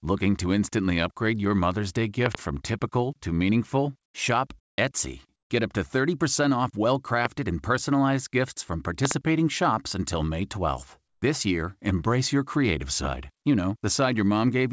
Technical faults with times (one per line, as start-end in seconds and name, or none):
2.26-2.37 loud pop
4.60-4.78 comfort noise in place of the background
7.25-7.27 loud pop
9.05-9.13 loud pop